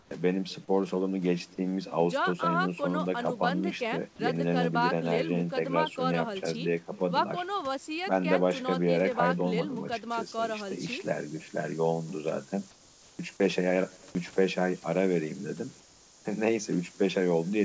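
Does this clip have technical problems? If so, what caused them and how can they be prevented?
Yes, there are three separate problems. The call itself came through a wideband path with nothing above 8 kHz, which fits G.722 at 64 kbps.

The first is echo with no canceller, and it runs the whole way through. Every phrase has a faint, thin shadow trailing roughly 300 ms behind it, sitting about 28 dB under the speech. That's the far end's loudspeaker feeding back into its own microphone, with nothing stripping it out before it returns over the network round trip. To prevent it, enable acoustic echo cancellation on the far-end device or have that person use a headset.

Second, comfort noise is replacing the background in three short gaps: 0.0 to 0.11 s, 12.71 to 13.19 s, and 15.80 to 16.25 s. In each one the natural room background drops out and is replaced by a smooth, featureless hiss, about 6 dB quieter in the first gap and about 3 dB quieter in the other two. 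The likely cause is discontinuous transmission: the sender's voice detector decided nothing was being said, stopped sending, and the receiver synthesised noise to fill the silence. To prevent it, turn off DTX/VAD on the sending side, or at least make the voice detector less aggressive.

Third, from 10.1 s to the end there's low bit depth with noise shaping. The audio is reduced to only 6 bits, and the rounding error has been pushed up into the top of the band. You hear a steady, bright hiss that leans heavily toward the treble, and it's nearly as loud as the speech itself. To prevent it, keep the signal at 16 bits or more all the way through the chain, and check for any stage that truncates or requantises.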